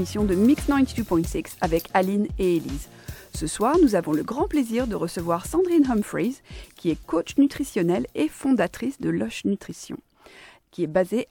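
No technical faults can be heard at any point in the audio.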